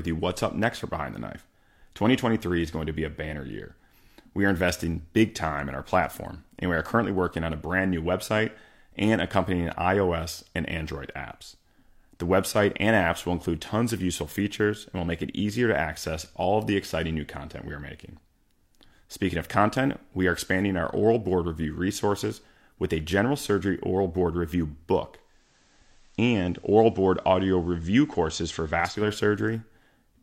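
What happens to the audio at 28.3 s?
At 28.3 s the speech sounds about 1 dB quieter, with faint hiss, because the radio is blending to analogue FM (25.10–29.17 s, after "surgery oral board review").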